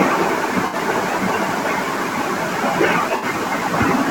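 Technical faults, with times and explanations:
0.67–0.75 s and 3.16–3.25 s: AAC frame loss with concealment. About 64 ms of audio is missing each time, which fits three lost frames. The decoder filled each gap from the last good spectrum. So the speech briefly turns smeared and phasey.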